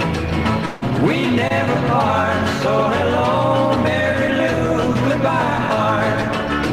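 Audio with two network impairments. From 0.65 to 0.84 s the sound smears into a decaying synthetic continuation with no true silence, likely a long network dropout losing about 160 ms of signal. At 1.48 to 1.52 s, a short concealed packet loss leaves a brief wobble where roughly 20 ms was missing and was bridged by extrapolation.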